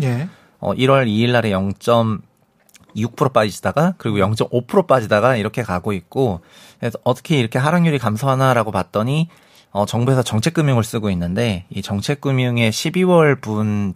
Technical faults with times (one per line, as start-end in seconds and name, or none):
none